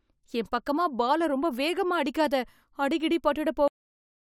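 At 3.68 s, just after "ரொம்ப வேகமா அடிக்காத அடிகிடி", the speech has a cut-off end. The final stretch of audio was never written out, so the sound stops mid-utterance and falls straight to digital silence, with no natural decay, for the remaining 0.57 s.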